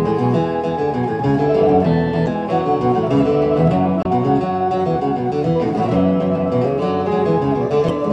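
At 2.24 to 2.28 s, 4.01 to 4.06 s and 7.86 to 7.90 s, damaged data in the compressed stream corrupts a short run of frames. Each time, the decoder cannot make sense of the altered bytes, loses its place in the stream and hunts for the next valid frame header before playback resumes. Each of the three events comes through as a brief chirp, squawk, click or short hole of roughly 40 to 50 ms that cuts across the audio.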